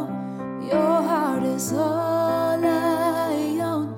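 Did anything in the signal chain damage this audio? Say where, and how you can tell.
No, nothing in the chain from capture to playback leaves an audible mark on this audio, and no stage shows a fault.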